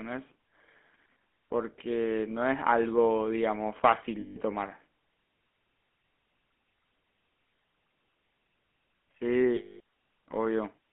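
From start to finish the speech carries the buzzy, gravelly roughness of the GSM full-rate codec. The regular-pulse excitation and the 200 Hz to 3.4 kHz band fit a 13 kbps stream. A spectrogram shows a hard ceiling near 3.4 kHz and coarse, smeared harmonics.

Lost GSM frames occur at 4.20 to 4.37 s (160 ms) and 9.56 to 9.80 s (240 ms). The last good frame's settings were repeated, which gives a rough metallic ring. On a spectrogram each gap appears as frozen bands.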